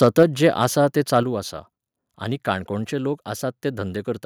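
From 0.03 to 0.47 s the loudest peaks crackle harshly. That's likely microphone overload, with input running about 2 dB past the converter's ceiling and around one percent of samples flattened. At 0.23 s and again at 1.23 s, voice and background drop suddenly by about 3 dB and then about 5 dB, likely the microphone volume being stepped down by the call software.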